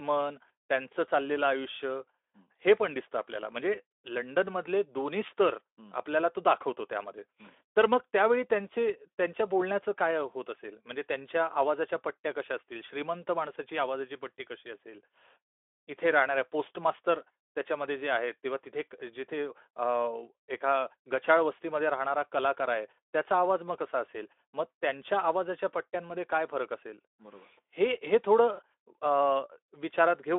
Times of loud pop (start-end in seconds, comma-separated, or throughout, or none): none